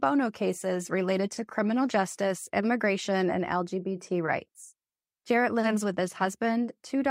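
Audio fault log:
No audible faults in this speech recording.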